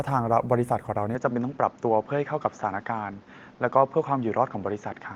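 From 1.15 s onward the speech turns duller, likely an input switched to a poorer device: on a spectrogram the energy stops abruptly near 7.1 kHz, with no gap or level step, and a faint noise floor appears about 35 dB down.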